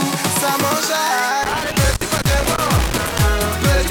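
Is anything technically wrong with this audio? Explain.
Yes, there is loose connector crackle from about 1.43 s to 3.23 s. A worn or dirty contact somewhere in the signal path is failing to hold steady contact, so the connection rapidly makes and breaks as it shifts. Each break chops the signal off and each reconnection snaps it back, and for roughly 1.8 seconds this produces an irregular, scratchy burst of crackle layered over the audio rather than a clean, continuous signal.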